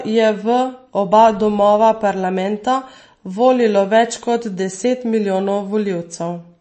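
Sample clock jitter, throughout the speech: the converter clock wanders by around a microsecond and a half, adding a fine hiss roughly 40 dB down that thickens on loud, bright syllables.

Throughout, nothing sounds above 8.3 kHz and sibilants turn watery and swirly, likely from MP3 compression at a starved bitrate near 32 kbps dropping weak frequency lines.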